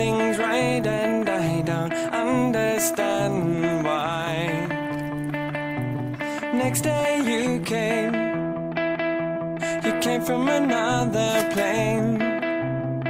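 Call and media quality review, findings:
Nothing to flag here, no faults turned up anywhere in the clip.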